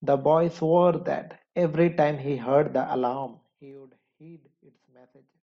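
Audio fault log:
3.09 to 3.79 s, zipper noise: the speech drops by roughly 25 dB in coarse 2 dB steps, around fifteen per second, rather than gliding down. Each jump is an instant gain discontinuity, so it clicks, and the run of clicks rides on the voice as a fast ticking buzz. On the waveform the envelope descends as a staircase. On the spectrogram thin vertical broadband lines appear at each step.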